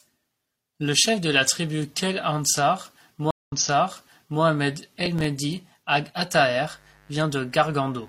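Speech runs into trouble at 3.31 s, where the sound drops out for 175 ms and resumes about 0.94 s earlier, fading back in, with the disturbance lasting until 4.42 s. This is a stream reconnect: the connection broke and a fresh decoder restarted from resent data. From 4.93 to 5.25 s a gritty crackle tears across the speech as short scraps of old audio repeat with hard edges. This is processor overload crackle, where about seven buffer deadlines were missed, which fits buffers of around 5 ms. From 6.33 s to the end a steady, raspy buzz sits roughly 35 dB below the speech. This is mains buzz, with sharp switching spikes from 50 Hz mains leaking in and spreading harmonics up into the kilohertz range.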